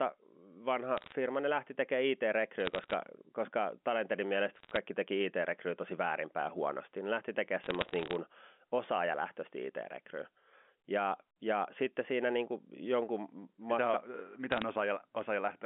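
Short bursts of sharp ticks and crackle sit over the speech at 0.98 to 1.12 s, just before "ne lähti tekemään", then at 2.60 to 2.93 s, 4.56 to 4.77 s, 7.64 to 8.16 s after "lähti tekemään", and 14.52 to 14.62 s. These are bit errors on a digital phone line. Flipped bits, a fraction of a percent, corrupt single samples in the A-law telephone stream, and hits on sign or high bits produce the clicks.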